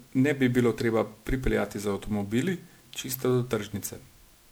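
From start to finish the speech has that swirly, hollow smear you get from generation loss, most likely from being run through a lossy MP3 encoder again and again, something like seven passes at a rate that sounds like 128 kbit/s. Each re-encode quantises on a shifted frame grid, so the noise and spectral holes stack up. The result sounds worse than that bitrate should, with consonant attacks blurred and a watery shimmer over everything.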